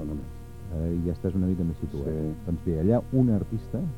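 Nothing is technically wrong with this audio.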